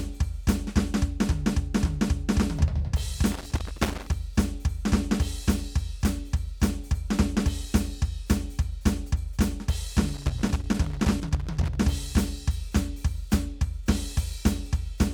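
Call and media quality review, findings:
Loose connector crackle in music, 3.32–4.14 s and 10.09–11.76 s: irregular bursts of crackle and scratching. Probable component: worn or dirty cable contact. Mechanism: contact making and breaking as it moves, chopping the signal.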